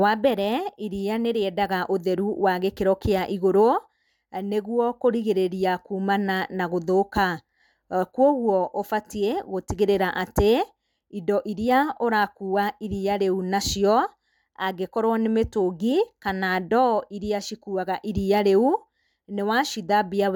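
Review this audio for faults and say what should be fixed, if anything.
Nothing here needs fixing: the speech signal stays technically intact throughout, with no faults to report.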